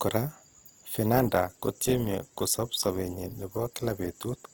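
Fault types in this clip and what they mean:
Adaptive stream at a lower bitrate: the connection slowed, so from 1.14 s to the end the player switched to a cheaper encoding of the stream, which fits a step down from roughly 64 to 16 kbit/s Opus. The speech abruptly turns grainier as compression artefacts build up, with no gap or dropout marking the change.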